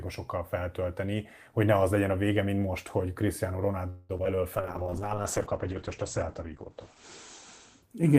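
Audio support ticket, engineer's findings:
Call audio freeze, 3.89 to 4.11 s: packets likely held up in transit, jitter buffer ran dry. Receiver extends the last sound for about 200 ms as a fading buzz or hiss, then resumes where it stopped. Nothing lost; playout delay grows by 200 ms.

Short concealed packet loss, 4.17 to 4.20 s: about 20 ms of audio missed the decoder. Concealment continues the prior sound, then crossfades back into the real signal. Brief smear or wobble; a short consonant may drop.

Skip ahead, 4.24 to 4.27 s: a stretch of audio dropped in transit or by the jitter buffer, with later audio already queued. Roughly 70 ms of audio is gone and playback jumps forward, the two sides spliced almost directly with no real gap.

Jitter buffer slow-down, 4.36 to 5.23 s: buffer rebuilds its reserve by repeating single pitch periods and pause fragments. This adds 94 ms, so playback runs at 90% speed with unchanged pitch. 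Drawn-out sounds.

Call bitrate drop, 4.58 s to end: bandwidth estimate collapses and Opus is pushed from 40 to 9 kbps, held at the floor for about 2.3 s. Coarser coding makes the sound rough and watery, and the audio band narrows from 20 kHz to 8 kHz, so it turns muffled.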